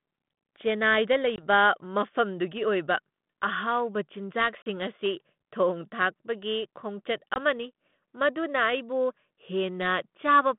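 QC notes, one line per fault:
1.36 to 1.44 s, 4.62 to 4.67 s and 7.34 s, packet loss on an ADPCM call: hard-edged silent gaps of 20, 40 and 20 ms, so about a packet or two each. Sound comes back at "ꯃꯐꯝꯗꯨꯒꯤ ꯑꯣꯏꯕ", "ꯑꯁꯤ ꯊꯣꯡ ꯊꯥꯛꯄꯒꯤ" and "ꯑꯃꯅꯤ ꯃꯗꯨꯅ" with a brief slight roughness. That happens because the decoder's adaptive predictor and step size drifted from the sender's during each hole, and they take a few tens of milliseconds to resync over the 32 kbit/s G.726 line.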